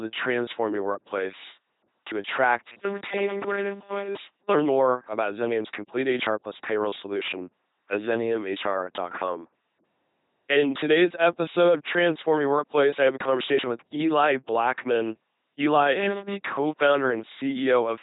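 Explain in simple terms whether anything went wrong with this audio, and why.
Yes, two things went wrong. Throughout the whole clip, the speech has passed through an LPC-10 vocoder, a very low-quality military speech codec, and the damage is heavy. It rebuilds the voice from a simple buzz or hiss, treating every instant as one or the other, so it sounds mechanical and robot-like, with nothing above 3.9 kHz.

In two short stretches, from 2.72 to 4.58 s (after "your workplace to attract", before "more about") and from 15.95 to 16.35 s, there is a robotic sound from repeated short buffers. Most of the audio there is replaced by copies of a tiny snippet, likely because sound arrived too slowly. Unlike the vocoder's constant robot voice, this is a stiff, metallic buzz locked at 200 Hz, which fits repeats about 5 ms long, and it appears only in those two places.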